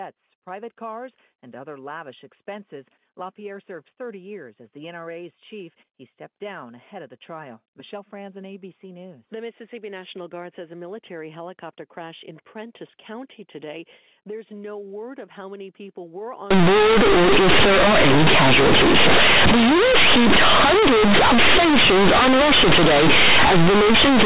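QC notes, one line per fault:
16.51–24.25 s, companded audio read as linear: right after "how many people were", the mu-law bytes play as raw 8-bit samples without expansion, so everything turns loud, buzzy and harsh, with noisy pauses.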